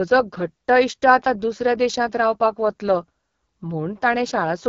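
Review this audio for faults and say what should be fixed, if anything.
The whole clip carries AMR wideband (HD Voice) codec damage, and it's plainly audible from start to finish. The speech has that rough, raspy edge you get when the codec's pulse-based model of the vocal tract is starved of bits, which fits one of the low modes around 8.85 kbit/s. Nothing sits above about 7.6 kHz, and the top band is synthetic filler rather than real detail. To prevent it, capture or transfer at 12.65 kbit/s or higher, or use a wider-band codec.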